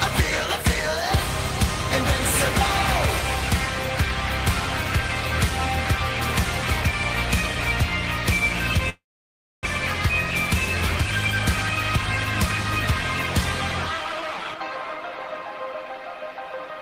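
From 8.89 s to 9.67 s the audio stops, most likely from a long network dropout. The last sound is stretched into a fading buzz, then about 0.63 s of silence follows, and playback resumes with roughly 0.4 s missing. Unlike a brief glitch, nothing is repeated or recovered.

From 13.97 s to 15.73 s a jitter buffer speed-up plays the audio at 118% speed, trimming about 0.3 s of built-up delay. The pitch stays the same, which separates it from a simple playback-rate error, but the sound is audibly hurried.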